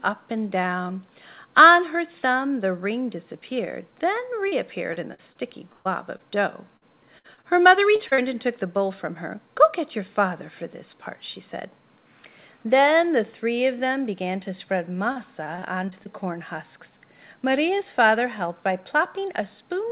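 Repeated packet loss (robotic sound) hits from 4.48 to 8.20 s and again from 15.12 to 16.08 s. Short holes of up to 125 ms are patched by extending the preceding sound, producing choppy audio with pieces missing. A spectrogram shows repeated, smeared bands and brief dropouts beneath the 4 kHz ceiling.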